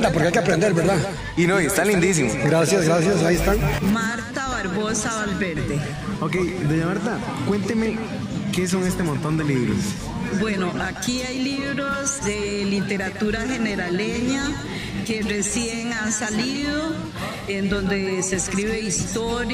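A second, slower capture path or a misaligned edit has likely mixed the same audio in twice, producing a doubled audio track throughout. A full-band copy trails the original by roughly 150 ms at about 10 dB lower, giving a dry, slapback-style echo with no decay or room colour.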